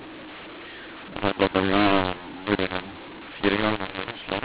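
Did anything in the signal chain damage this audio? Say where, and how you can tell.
Yes. The damage happens at the codec stage, where G.711 telephone audio is decoded. It is a mu-law and A-law mix-up. The speech was encoded with A-law but decoded as mu-law. The fault runs through the whole clip. The two laws map the 8-bit codes to levels along different curves. So every sample comes back at the wrong size. Loud and soft parts are scrambled, and the speech sounds harsh and distorted. Pauses fill with noise instead of falling silent.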